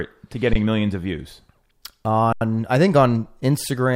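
At 0.53 to 0.56 s, just before "millions of views", and at 2.33 to 2.41 s, before "I think", the speech freezes for 21 ms and 85 ms in an underrun with held sample. The output ran dry and held its last value, so the waveform goes flat and silent with little or no click. Playback then resumes where it stopped, so each gap ends softly. The gap lengths fit 1024- and 4096-sample buffers.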